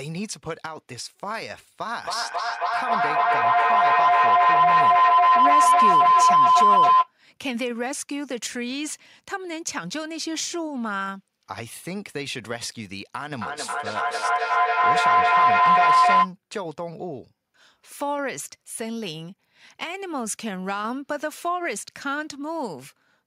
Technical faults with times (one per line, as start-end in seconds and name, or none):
1.87-7.13 feedback howl
13.32-16.35 feedback howl